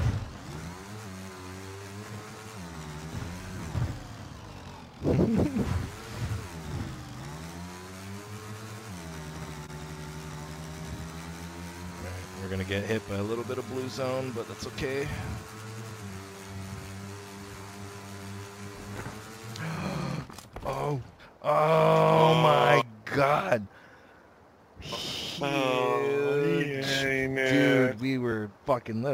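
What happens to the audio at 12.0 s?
Compressed frames skipped from 12.01 to 12.05 s: missing or rejected frames make the audio jump ahead about 50 ms, leaving a brief smeared blip at the join if the codec is lossy or a hard click if it is lossless, visible as a discontinuity.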